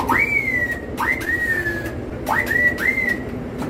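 Between 1.25 and 2.13 s, scattered short gaps: about five brief losses, each roughly 10 ms, concealed by extending prior sound, leaving brief ticks and small hiccups.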